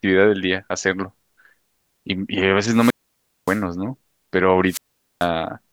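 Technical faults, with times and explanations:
2.69–3.63 s and 4.67–5.28 s, wireless microphone squelch dropout: twice the radio link from the mic fades, a quick swell of hiss comes up, and then the receiver's squelch shuts the output, leaving a hole of near silence of about 0.57 s the first time and 0.44 s the second before the signal recovers. The squelch is muting deliberately, because a weak FM signal would otherwise come through as loud static.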